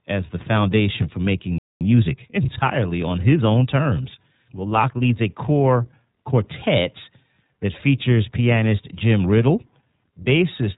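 The speech is carried by the iLBC codec for its whole length. It is a narrowband voice codec, so nothing above 4 kHz gets through and the sound is muffled and boxed in. Each short frame's excitation is coded on its own, which fits a 20 ms frame and a rate near 15.2 kbps. The coding damage is plainly audible. Consonants and vowels come out rough and synthetic.

At 1.58 s the sound stops dead in mid-flow. A playback stall follows, a gap of silence lasting about 225 ms, until 1.81 s. The likely cause is that the player ran out of data or its thread was held up. Either way, output halted until it could resume.

From 1.81 s to 2.71 s comes time-compressed catch-up. The player is clearing the backlog built up during the gap. It drops small slices of audio and cross-fades the joins, so the speech runs at 1.25 times normal speed. Pitch stays where it should be. The passage simply sounds hurried, as if rushed to get back in step. 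After 2.71 s the pace returns to normal.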